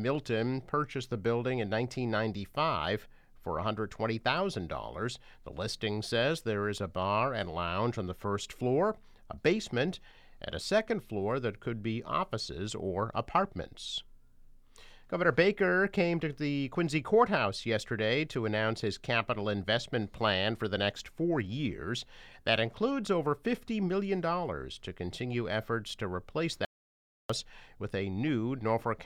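At 26.65 s the sound cuts out and returns at 27.30 s, an audio dropout to silence lasting 0.65 s, likely from the input being lost while recording continued. No room tone remains: the waveform flattens to near silence and the spectrogram shows a blank band.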